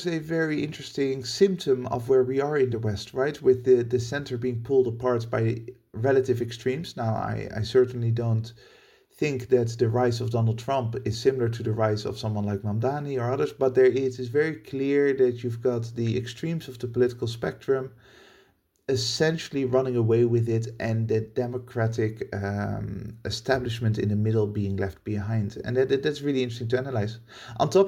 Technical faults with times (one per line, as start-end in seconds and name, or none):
none